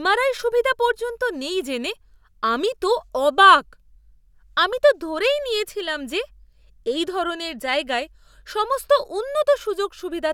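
No technical faults can be heard anywhere in this recording. The speech continues without any break or audible damage from beginning to end.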